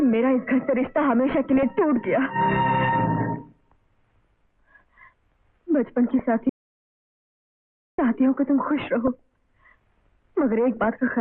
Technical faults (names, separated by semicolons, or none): DAB burbling; audio dropout to silence